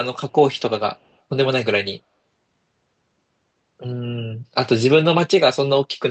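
Between 0.96 and 1.16 s, an echo leak lets a delayed copy of the speech slip back into the call. The likely cause is a loudspeaker on the far side whose echo canceller failed to remove everything its microphone caught, so the residue was returned. The copy trails the original by 120 ms and sits very far down, about 40 dB beneath the speech as a faint trace, all within a band that tops out near 8 kHz.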